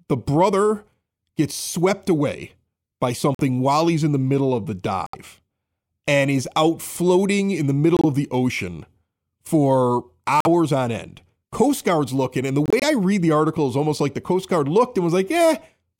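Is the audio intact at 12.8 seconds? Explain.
No, a corrupt frame muted gap runs from 12.66 to 12.84 s: damaged compressed frames were rejected by the decoder and replaced with silence, leaving an abrupt 0.18 s hole in the speech.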